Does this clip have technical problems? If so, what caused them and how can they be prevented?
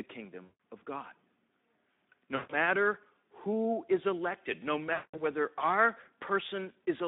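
Yes. The whole clip runs through the Speex codec at a low setting, which fits a rate of about 11 kbps, on a narrowband line of roughly 200 Hz to 3.7 kHz. With so few bits for the excitation, the CELP coder can only approximate the glottal pulses, so the speech sounds hoarse, grainy and somewhat buzzy, and it lacks all content above 3.7 kHz. To prevent this, run Speex in wideband mode at a higher quality setting, or use a modern codec such as Opus.

VoIP packet loss concealed by the speech codec occurs three times: at 0.43 to 0.57 s, 2.35 to 2.54 s and 4.93 to 5.21 s. The gaps fit runs of about seven to ten lost 20 ms frames, around 140 to 200 ms in total. During each gap the decoder keeps repeating its last pitch and filter at falling gain, so the sound is stretched out and fades. It stays weak and distorted for a moment after packets resume, because each new frame is predicted from the corrupted state before it. 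To prevent this, use a jitter buffer with forward error correction or redundant packets on the network path.

A bit error spike occurs at 6.33 s. A single sample was corrupted by one flipped bit, which jumped its value by a power of two before it returned. The result is one sharp broadband tick that has nothing to do with the speech around it. To prevent this, use error-checked links and memory, and discard or interpolate over samples that fail a checksum.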